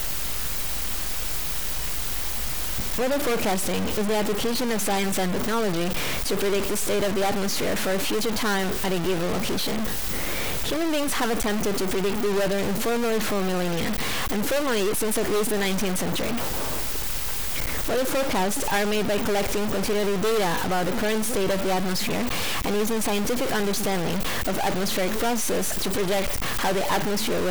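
From start to finish the speech carries distortion, and pauses are filled with noise. This is likely a stuck bit in the converter or data line.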